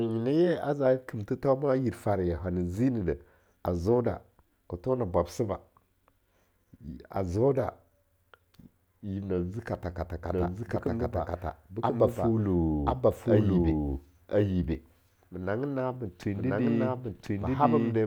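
From 10.32 s to the end, the speech doubles: a full-strength copy trails about a second behind, dry and abrupt, likely a doubled audio track from a second, slower capture path.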